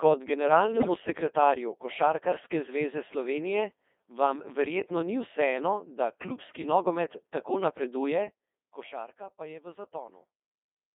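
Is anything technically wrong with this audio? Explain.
Yes. The whole clip runs through a Codec 2 vocoder at 2.4 kbit/s, band-limited to 250 Hz to 3.6 kHz. It resynthesises speech from pitch and envelope parameters, so it sounds robotic and buzzy.

From 0.74 to 0.94 s, bit errors on digital voice radio, at a rate of around 10 percent, corrupt what sounds like several vocoder frames. Pitch, level and timbre jump into warbling gibberish.

From 8.01 to 9.24 s, zipper noise appears as the level drops roughly 15 dB in unsmoothed steps, around 20 per second. Each step clicks, producing an audible ticking.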